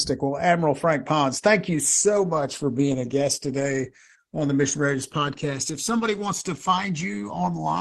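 From the start, a slow flanging sweeps through the speech when the channels are heard together, with hollow notches gliding gradually up or down the spectrum. These are channels drifting apart. The two sides were captured on devices with separate clocks that disagree by around 150 parts per million, so the offset between them keeps growing, to roughly a millisecond by the end. Mixed to mono, that sliding delay moves the comb-filter notches continuously.

At 1.73 s the quality drops abruptly and stays degraded to the end. Codec artefacts rise, with no gap or dropout at the switch. This is an adaptive stream at a lower bitrate: a slowing connection pushed playback onto a cheaper encoding, and the sound fits a step from about 64 kbit/s Opus down to about 16 kbit/s.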